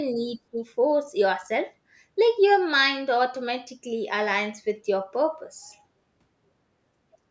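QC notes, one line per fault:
0.14–0.25 s, speech suppressed in double talk: the speech dips by about 5 dB for roughly a tenth of a second. The likely cause is the echo canceller turning down speech it mistook for echo.
0.51–0.6 s, speech suppressed in double talk: a deeper dip of about 15 dB, as the same suppression likely clamps down harder.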